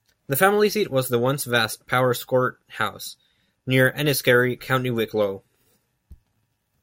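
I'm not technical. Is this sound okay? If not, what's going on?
Yes, it sounds fine: nothing in this recording stood out as a problem when I listened to it.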